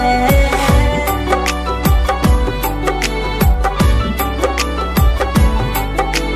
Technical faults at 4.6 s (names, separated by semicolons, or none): none